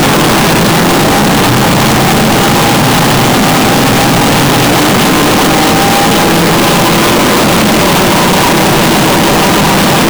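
From start to finish, 32-bit floating-point samples were likely read as 32-bit integers, so each value's sign and exponent bits, not its actual amplitude, decide the level. This is float read as integer. The waveform is forced into a nearly square shape sitting at an almost fixed, high level, whatever the original loudness. The result is very loud and harsh, with quiet background noise pushed up as loud as the main sound, though its pitch can still be followed.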